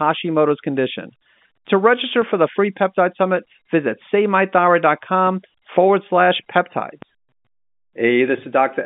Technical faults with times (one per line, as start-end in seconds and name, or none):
2.22 DC step
5.27 DC step